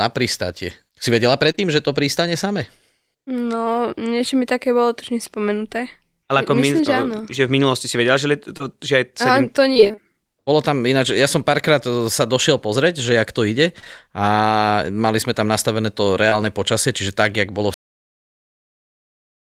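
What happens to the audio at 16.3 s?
At 16.30 to 16.33 s, right after "sme tam nastavené to" and before "počasie čiže", there is a short concealed packet loss. About 20 ms of the call never arrived, and the receiver bridged roughly 18 ms by extending the preceding sound before blending back into the real signal. It is heard as a brief smear or wobble. On a spectrogram, a thin vertical strip shows smoothed, repeated texture.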